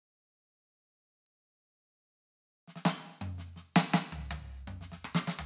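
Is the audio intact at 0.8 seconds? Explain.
Yes, the music plays through 0.8 s intact, with no dropout, click, distortion or other fault at that moment.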